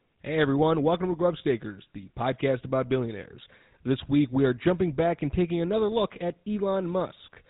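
Buzzy, gravelly roughness runs from start to finish of this speech recording, and everything above 4 kHz is gone, leaving it dull and telephone-like. It is the sound of the GSM full-rate codec, whose damage here is plainly audible. The codec rebuilds each voice from a vocal-tract model excited by regularly spaced pulses that keep only every third excitation sample, which produces the grainy buzz. The coarseness fits a rate of about 13 kbps.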